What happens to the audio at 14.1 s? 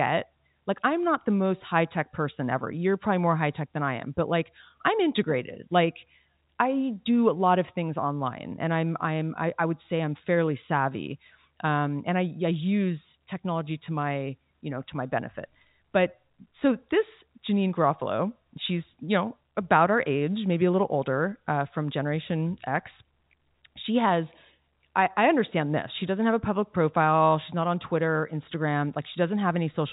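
Nothing goes wrong at 14.1 s: the speech carries on intact through that moment, still band-limited by the G.711 telephone coding with nothing above about 3.8 kHz.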